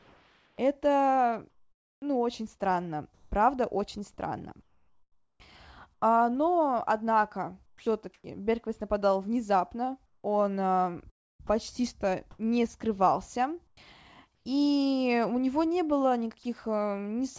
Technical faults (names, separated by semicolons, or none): comfort noise in place of the background; onset clipped by the voice detector; sound dropped by the voice detector; sound chopped by the voice detector